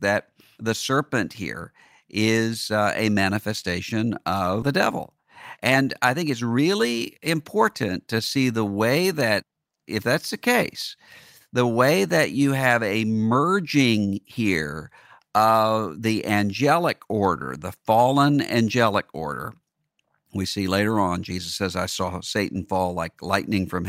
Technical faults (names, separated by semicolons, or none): skip ahead; jitter buffer speed-up